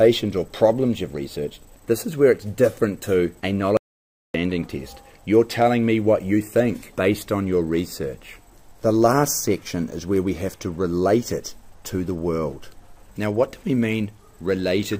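At 3.77 s the audio cuts out mid-flow and stays completely silent until 4.34 s, an audio dropout to silence lasting about 0.57 s. The gap holds no room tone or background at all, so it is a true hole rather than a quiet passage. The input was likely lost for that moment, whether through a disconnected device, a failed link or a stray mute, while recording carried on writing silence, and whatever sounded during that half-second is gone.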